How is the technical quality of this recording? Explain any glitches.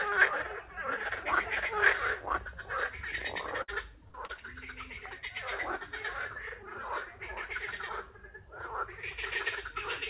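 The recording is marred by three brief dropouts clustered just before the halfway point, heard through a telephone-style band that stops at 4 kHz, which fits G.711 mu-law at 64 kbps.

Burst of packet loss, at 3.62 to 3.70 s and again at 4.08 to 4.16 s: roughly 60 ms of audio went missing each time, and the receiver stretched the last sound to cover it, fading it down. You hear a short held buzz or dimming hiss, then a jump. A spectrogram shows smeared, frozen bands tapering off; the waveform shows a decaying envelope before an abrupt restart.

Short concealed packet loss, at 4.26 to 4.31 s: about 40 ms failed to arrive, and roughly 30 ms was patched by extrapolating the preceding sound before blending back. It comes across as a quick smear or wobble. On a spectrogram it appears as a thin blurred sliver; the waveform shows a small kink.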